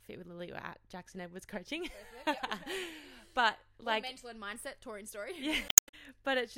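Speech with damaged data in a compressed stream, twice. A brief glitch follows "at jackson edwards coaching" at 2.37 to 2.40 s. A longer glitch follows "and mindset touring story" at 5.66 to 5.94 s. Corrupted frames break decoder sync.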